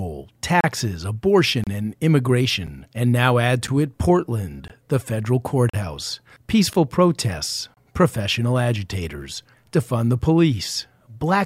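Gaps between stream segments at 0.61, 1.64, 2.67, 3.67, 4.68, 5.70, 6.73 and 7.74 s leave hard-edged silences of 8 to 39 ms, one per 1-second segment. Unlike dropouts, no speech is lost; it simply resumes later.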